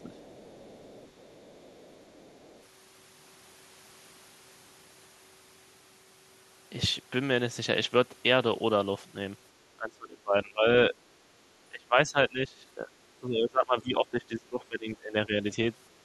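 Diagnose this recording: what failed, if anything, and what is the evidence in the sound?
Other side's voice leaking through, 0 to 2.62 s: a faint second voice sits roughly 30 dB below the main speech. Stage is call processing. The echo canceller likely left part of the loudspeaker signal in the microphone path, so the far end returns.

Speech suppressed in double talk at 0.01–0.22, 9.76–10.65, 10.90–10.94, 11.7–12.91 and 13.21–15.35 s: the talker's level sinks, by as much as about 25 dB near 10 s. Call processing likely attenuated the near speech while treating overlapping sound as echo.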